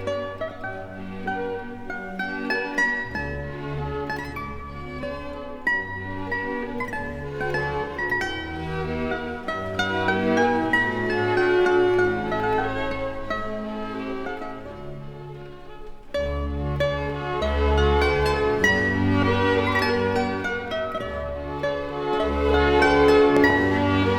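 At 23.37 to 23.52 s, near the very end, a loud pop lands on top of the sound: two sharp thumps in quick succession, well above the surrounding level, while the audio carries on underneath. The likely cause is a sudden voltage step or pulse, such as from a plug, switch, static or driver glitch, entering the chain and being shaped by the circuits after it. On a waveform it shows as two tall spikes; on a spectrogram, as two bright vertical stripes spanning the full frequency range.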